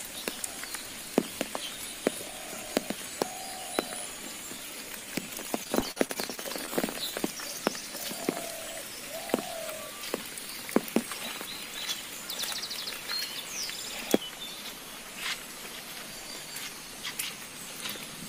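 From 5.63 s to 6.71 s the sound turns choppy, with small pieces missing. This is repeated packet loss: about ten brief holes in quick succession, the longest roughly 45 ms. Each hole was papered over by stretching the preceding sound, which adds up to about 229 ms of smeared fill across the stretch, around a fifth of it, while roughly 160 ms of the real signal never arrives.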